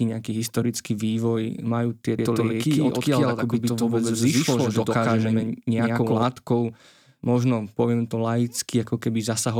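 From 2.19 to 6.23 s there is a doubled audio track, likely from a slower second capture path or an edit stacking two copies out of step. A full-band copy, about as loud as the original, trails roughly a tenth of a second behind, starting and stopping abruptly.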